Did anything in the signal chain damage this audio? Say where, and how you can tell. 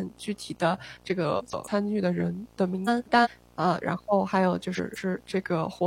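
Yes. A steady buzz at 60 Hz, about 30 dB below the speech, runs through the whole clip with hash riding above it. It is picked up in the analogue wiring from a display or video cable. That hash and the field-rate fundamental separate video or display buzz from plain mains hum.

From 1.25 s to 2.72 s the speech drops about 6.2% in speed and about 111 cents in pitch, then snaps back. This is likely a drift correction step at the driver or buffer stage. The abrupt entry and exit distinguish it from gradual tape-style wow.

Frames out of order appear at 1.38 to 1.68 s, 2.86 to 3.28 s, and 4.75 to 5.18 s. In each, two neighbouring blocks of about 139 ms or 186 ms play swapped, with garbled flutter. This points to network or storage reordering. Unlike a dropout, no time is lost.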